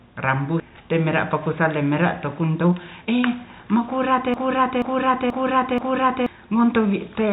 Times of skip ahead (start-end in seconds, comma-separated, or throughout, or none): 0.60-0.62